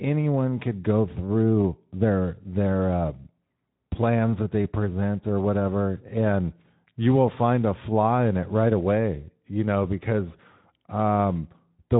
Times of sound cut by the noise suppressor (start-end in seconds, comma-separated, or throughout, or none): none